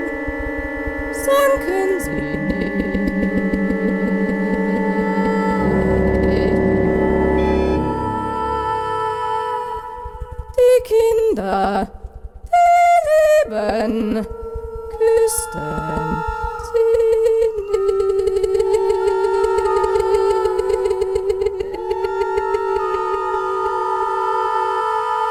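From 9.73 to 10.69 s the audio runs about 9% fast at unchanged pitch, a jitter buffer speed-up trimming roughly a tenth of a second to reduce delay.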